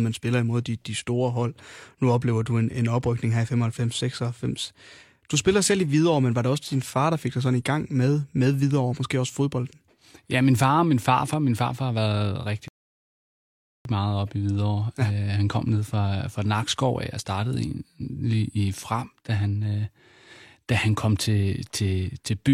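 A speech clip that goes abruptly silent at 12.68 s and picks up again at 13.85 s exactly where it left off, with nothing skipped. That is a rebuffering stall: playback ran out of downloaded audio and waited for more, adding about 1.17 s of dead air.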